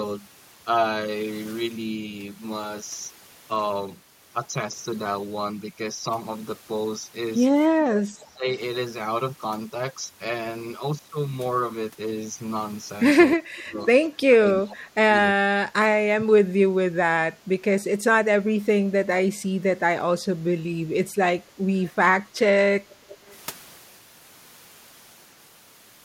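The speech dips at 7.82–8.48 s, 13.36–13.8 s, 14.22–16.37 s, 17.45 s, 18.86–19.43 s and 20.84–21.05 s. This is likely speech suppressed in double talk. The canceller turned down the talker along with the far side. The deepest drops are around 20–25 dB.

At 22.89–23.35 s a faint copy follows 320 ms behind, about 25 dB down. This is likely an echo leak from uncancelled loudspeaker pickup.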